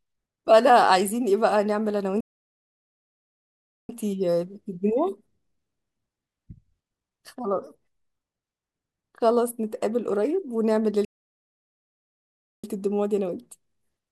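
At 2.20 s the speech just cuts out and there's nothing until 3.89 s, a gap of about 1.7 s, before it picks up again. The same thing happens from 11.05 s to 12.64 s, roughly 1.6 s of dead air. Both are playback stalls: the player most likely ran dry of buffered data or had its thread held up, so output went silent mid-flow until it caught up and carried on.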